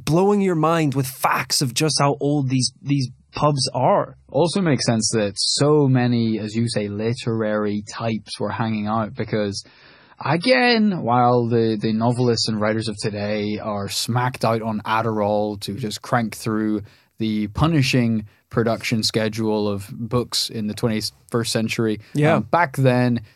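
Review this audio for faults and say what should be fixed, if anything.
Adaptive stream at a lower bitrate, 1.9 to 13.9 s: the connection slowed, so the player switched to a weaker rendition. Nothing above 10.5 kHz survives and codec artefacts rise, which points to about 24 kbit/s MP3. Quality drops abruptly after "mind with facts of" and recovers before "smacked out on". Prevent it with a larger playback buffer or a higher minimum bitrate floor.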